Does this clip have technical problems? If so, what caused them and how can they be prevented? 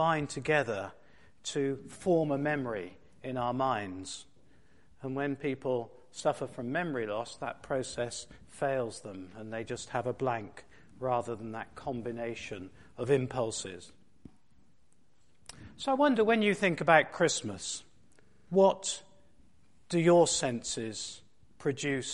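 Yes. A system hang loop occurs from 18.26 to 18.48 s. The computer or audio driver stalled while the sound hardware kept replaying the same block of its ring buffer. A 42.67 ms slice of sound repeats exactly five times at 23.4 Hz, which fits a 2048-sample buffer, and about a fifth of a second of the real audio is lost. To prevent it, fix the driver or CPU stalls that starve the audio thread, and run recording on a system with spare processing headroom.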